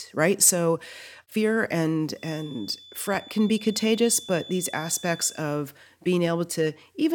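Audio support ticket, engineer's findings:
Feedback whistle, 2.13–5.46 s. Thin, steady 3.5 kHz tone sitting roughly 20 dB under the speech, level swelling and fading slowly. Likely cause: loudspeaker-to-mic loop held right at the feedback point, so one frequency keeps ringing without running away. Check monitor placement and mic gain.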